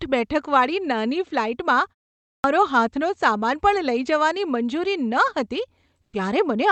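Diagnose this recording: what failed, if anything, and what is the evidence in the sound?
Clipped start after a pause, at the playback device: after a 0.34 s gap it wakes late, so 2.20–2.44 s, about 240 ms, is swallowed before "હાથનો સામાન પણ લઈ".

Comfort noise in place of the background, in the codec: from 6.01 to 6.13 s the real background becomes smoother synthetic noise about 8 dB quieter, likely from Opus DTX.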